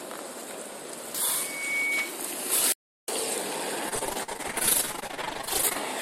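At 2.72 s the sound cuts out abruptly and stays completely silent until 3.08 s, an audio dropout to silence lasting about 357 ms. There is no room tone or noise floor in the gap, so the input was most likely lost for a moment while the recorder kept writing silence. On a waveform this shows as a flat line. A spectrogram shows a clean, fully black vertical band with hard edges on both sides.

From 3.89 s to 5.77 s the audio turns choppy, the typical sound of repeated packet loss (robotic sound). Dozens of short holes, the longest about 46 ms, were each patched by stretching out the last bit of sound, so roughly 45 percent of that stretch is concealment rather than real signal. A spectrogram shows smeared, repeated frames and frozen horizontal streaks broken by abrupt seams. The waveform looks stuttering and repetitive across the span.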